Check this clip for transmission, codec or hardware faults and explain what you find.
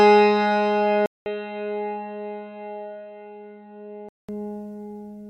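One fault is present: an input switched to a poorer device from 1.06 to 4.29 s. The likely cause is the recording path changing microphones, with a 200 ms gap at the switch. The sound then loses everything above 4.1 kHz, drops about 5 dB, carries a faint new noise floor, and turns dull until it clears.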